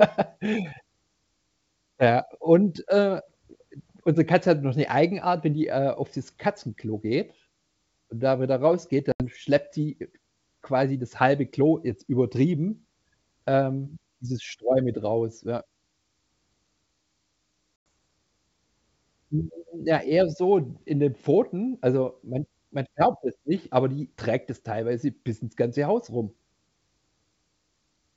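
At 9.12 s and again at 17.76 s the speech drops into a hard-edged silence, about 80 ms and then 100 ms long, a few packets each time. That is packet loss on an ADPCM call: the receiver's adaptive predictor and step size lose track of the sender's, so speech resumes slightly distorted before settling. On a waveform each gap is a flat line. A spectrogram shows a blank vertical band. The G.722 coding keeps its faint upper-band hiss, which fits 64 kbit/s.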